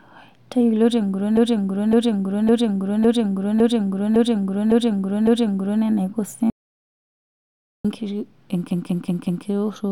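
The clip is speech with repeated frames. From 1.37 s to 5.83 s, a 557.3 ms block plays eight extra times. That is a long stutter. The length fits a run of about six compressed frames written again and again. It adds about 4.46 s to the clip. A second case runs from 8.71 s to 9.45 s. There a 185.8 ms block, about two frames, repeats four extra times and adds about 0.74 s. Between them is an audio dropout to silence from 6.50 s to 7.85 s. The sound cuts off mid-flow for about 1.35 s. The gap is silent with no room tone. The likely cause is a lost input while the recorder kept writing silence. Whatever was said in that gap is gone.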